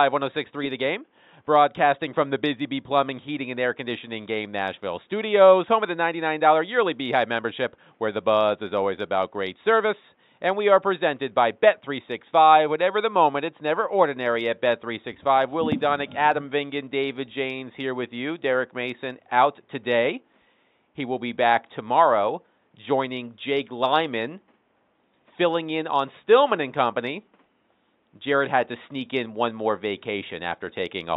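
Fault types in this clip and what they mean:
Nothing here calls for a fault entry, since the clip runs without any problem worth pointing out.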